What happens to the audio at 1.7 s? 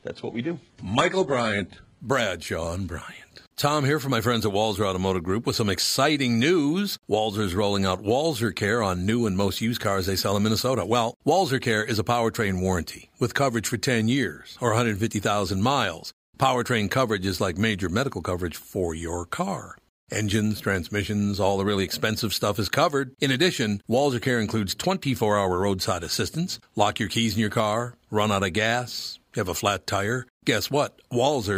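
At 1.7 s the player is still on the low-bitrate rendition it chose to start quickly. This is an adaptive stream starting at a low bitrate, lasting from 0 to 2.0 s while the connection was being measured. The speech sounds thin, with nothing above 11 kHz, synthetic-sounding treble and strong codec artefacts, which fits a very low rate around 12 kbit/s. At 2.0 s the quality jumps up suddenly, with no gap, to a much fuller stream.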